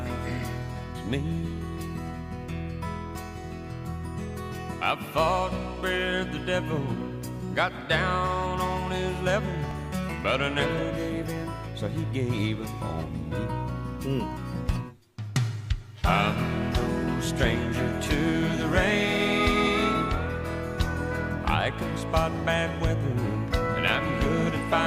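At 4.73, 9.71, 14.69 and 19.67 s the sound skips forward by about 20 ms. This is audio missing between chunks, likely from a recorder losing a sliver at each 5 s chunk boundary. Unlike a dropout, no silent gap remains; the two sides butt together.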